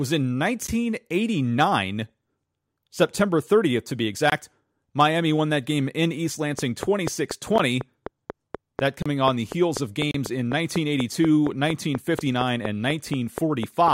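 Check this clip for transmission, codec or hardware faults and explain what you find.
Yes, there are faults: five blocks of digital silence and a train of clicks.

Blocks of digital silence occur at 0.67 s, 4.30 to 4.32 s just after "to be", 7.58 s, 9.02 to 9.06 s, and 10.11 to 10.14 s. Zeros replace the audio with no fade. The 14 ms and 13 ms gaps sound like ticks or dips. The 21 ms gap fits a 1024-sample block. The two 32 ms gaps are heard as short holes.

A train of clicks runs from 6.59 to 13.89 s. That is roughly 30 clicks at a regular 4.1 per second, about 15 dB above the speech. Their cause is likely interference, a faulty connection or a power supply. They tick over the speech and the pauses.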